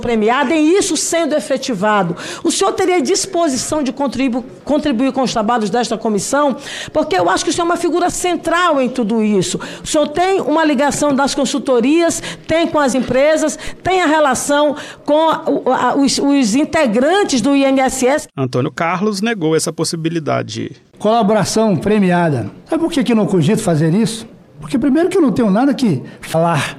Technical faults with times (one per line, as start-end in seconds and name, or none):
12.92-12.95 broken MP3 bit reservoir
13.67 DC step
26.32-26.35 broken MP3 bit reservoir